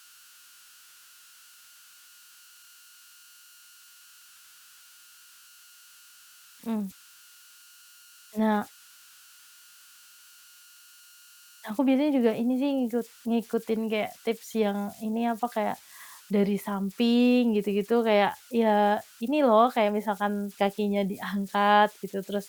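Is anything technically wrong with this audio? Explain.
Yes. Converter idle tones run throughout the speech. An undithered delta-sigma converter settles into repeating bit patterns when its input is small, creating a tone around 1.5 kHz in the pauses and grainy noise under quiet passages, about 29 dB below the speech.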